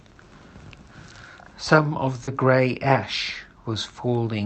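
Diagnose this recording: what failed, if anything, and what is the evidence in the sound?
Short concealed packet loss (network) at 2.23–2.30 s: 40 ms never arrived, so the decoder extended the preceding sound, leaving a smear that shows as an unnaturally regular spectrogram patch.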